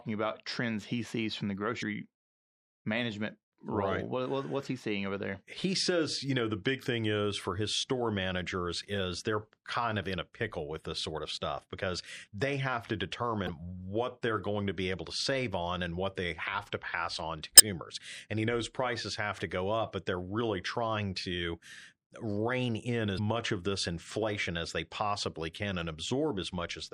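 All the way through, the speech has that watery, swirly quality with dulled treble and smeared consonants, likely MP3 compression at a low rate, something like 64 kbps. Then there's damaged data in the compressed stream at 1.79–1.83, 13.45–13.49, 17.56–17.60 and 23.15–23.19 s, where the decoder loses sync and spits out a short glitch.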